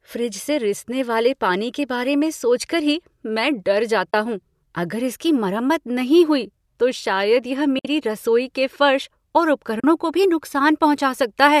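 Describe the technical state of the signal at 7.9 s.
Right around there you're at the tail of an AAC frame loss with muting. The dropout runs from about 7.79 to 7.85 s, between "हुई तो शायद यह" and "रसोई के फर्श और". The decoder zeroed the missing spectrum, so the overlapping windows fade the sound down and back up across the gap. You hear a soft-edged hole of roughly 60 ms, which fits a handful of the short frames the likely low-delay AAC compression uses.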